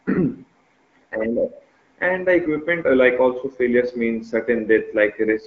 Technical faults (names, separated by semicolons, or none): none